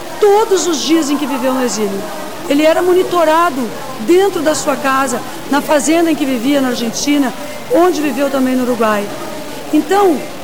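Grainy, gritty distortion runs through the whole recording, sitting only about 20 dB below the sound, likely from low bit depth without dither, consistent with truncation to around 5 bits. Unlike dithered requantisation's steady hiss, this grit rises and falls with the sound, and quiet passages sputter toward silence.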